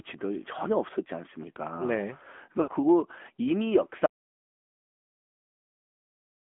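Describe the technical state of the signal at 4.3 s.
At 4.3 s the input has likely been lost, perhaps a disconnected device or failed link, leaving the recorder writing silence: an audio dropout to silence from 4.06 s to the end, with no room tone at all. The AMR narrowband mobile codec runs throughout the clip, so the speech before the cut sits in a 250 Hz to 3.4 kHz band, with plainly audible buzzy, synthetic damage that fits a rate around 10.2 kbps.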